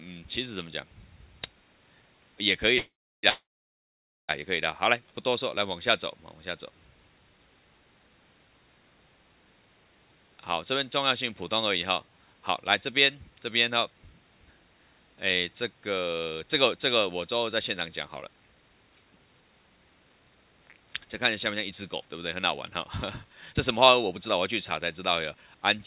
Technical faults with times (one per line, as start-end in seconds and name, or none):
2.78-4.31 call audio freeze
5.04-5.30 jitter buffer slow-down
16.04-25.75 jitter buffer speed-up
18.20-18.24 short concealed packet loss